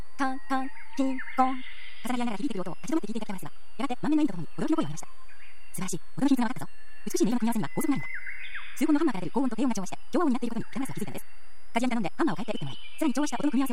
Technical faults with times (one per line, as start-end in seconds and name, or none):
0.00-13.72 switching supply whistle